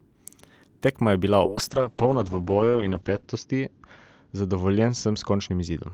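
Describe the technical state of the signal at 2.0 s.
At 2.0 s the signal is inside a call bitrate drop running from 1.48 s to the end. The encoder falls from 32 to 7 kbps and bandwidth narrows from 20 kHz to 8 kHz. Speech sounds coarse, watery and muffled.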